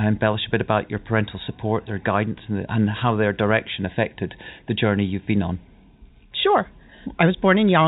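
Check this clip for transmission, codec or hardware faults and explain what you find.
Nothing amiss can be heard in the speech, which carries only the expected character of G.711 telephone coding: a band that stops at 4 kHz and, at most, a faint quantisation hiss that rises and falls with the signal.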